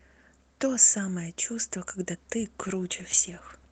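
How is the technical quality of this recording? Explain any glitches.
The speech carries one glitch near the end.

Call bitrate drop, 2.6 s to 3.7 s: the encoder was forced to spend far fewer bits, and the last 1.1 s turns rough and smeared. That fits a fall from about 32 kbps to about 13 kbps. The audio before it shows the ordinary coding texture of the call, with content up to about 8 kHz.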